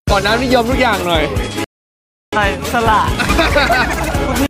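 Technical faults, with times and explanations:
1.64–2.37 s, digital broadcast dropout. The sound mutes for 0.68 s, then resumes further on. The receiver silenced failed frames, and the gap fits 16 lost frames.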